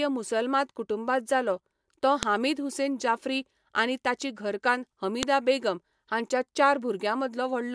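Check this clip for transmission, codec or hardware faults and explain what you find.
Two sharp, loud clicks cut through the speech, at 2.23 s, between "कुटुंबांत जालो तो" and "हामीद हुसेन जाफ्री आनी", and at 5.23 s, after "जाफ्री आनी ताची घरकान्न" and before "बेगम हांच्या". This is a file header played as audio: the clip was joined from 3-second WAV pieces, and each piece's header bytes were decoded as samples, producing a snap at every seam.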